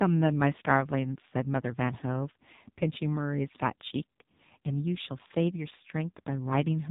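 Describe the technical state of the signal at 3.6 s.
At 3.6 s the speech is passing through the AMR narrowband mobile codec, as it does for the whole clip. It is coded at 5.9 kbps, so the damage is heavy. Nothing above 3.8 kHz survives. The vocal-tract model with sparse pulses makes the voice sound buzzy, muffled and synthetic.

Sample clock jitter is also present here and throughout. The converter's clock wanders by a fraction of a microsecond, so samples land slightly off time. The error is tiny, far below the signal. It adds a faint roughness on loud, fast-changing sounds and disappears in pauses.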